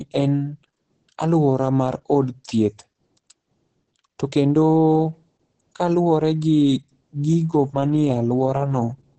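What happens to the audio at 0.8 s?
At 0.8 s the speech carries Opus voice compression, which runs through the whole clip rather than starting there. The sound has nothing above about 8.4 kHz and comes out muffled, hoarse and slightly robotic, consistent with Opus's SILK linear-prediction coder in wideband mode coding the excitation coarsely, at roughly 10 kbps. That grainy, buzzy roughness is what separates it from a plain low-pass filter, which would dull the sound but leave it smooth.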